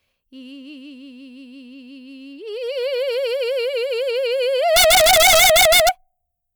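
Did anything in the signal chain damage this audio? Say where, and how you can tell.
Yes. Integer overflow from about 4.76 to 5.89 s in this music. Violent cracks land on the loud peaks there, far harsher than ordinary clipping. The damage sits in a fixed-point gain or sample-format conversion stage. The signal was pushed roughly 5 dB past full scale, and instead of being limited, each peak that crossed the largest integer value wrapped around to the opposite sign. That snaps the waveform across its entire range on every overshoot.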